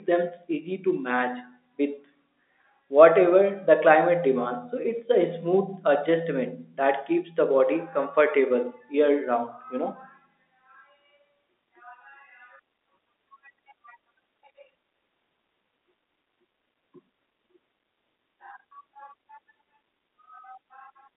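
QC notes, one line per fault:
No faults to note for this speech clip.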